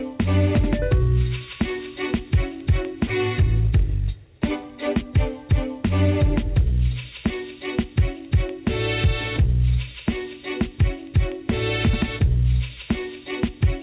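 No technical faults can be heard; the audio passed through a call path working as expected, and its band stops at 4 kHz, which fits a narrowband G.711 mu-law connection at 64 kbps.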